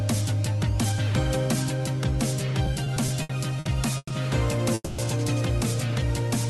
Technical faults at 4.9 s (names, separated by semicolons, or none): call audio freeze